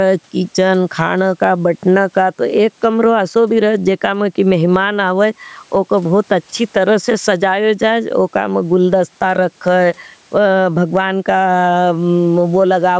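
Gain pumping runs throughout the clip: the level swings by around 10 dB, and the speech sounds squashed. The likely cause is input gain set far too high, with a fast limiter clamping each peak.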